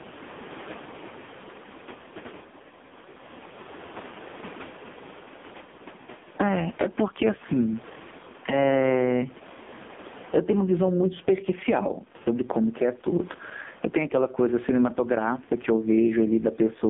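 Throughout the speech, the level breathes: the background swells in each pause and is pulled down hard under every loud syllable, a gain swing of around 20 dB. This is gain pumping, likely from input gain set far too high with a fast limiter clamping each peak. On the waveform the peaks sit flattened at a near-constant ceiling while the gaps fill in. On a spectrogram the noise floor brightens between phrases and darkens under them. The room noise, about 35 dB below the speech, is what rises and falls.

Also present for the whole clip is the AMR narrowband mobile codec at heavy damage. Its buzzy, synthetic tone fits the lowest AMR-NB mode, 4.75 kbps, where a vocal-tract model driven by a few pulses per subframe has very little to work with, and the background turns into a swirling warble. The line band runs from 200 Hz to 3.6 kHz, and a spectrogram shows a hard ceiling with nothing above 3.7 kHz and thin, smeared harmonics below it.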